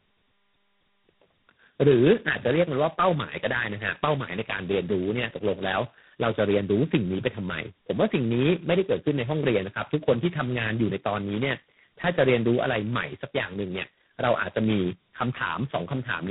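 Throughout, the speech shows tandem speech coding. It sounds like three speech coders in a row, which fits a G.726, G.729A, G.726 chain. Each one recoded the previous coder's damage. Nothing remains above 3.8 kHz. The result is rough, muffled and warbly.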